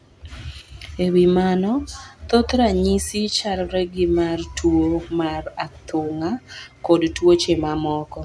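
A speech recording with nothing technically wrong to report. No fault of any kind can be heard at any point in it.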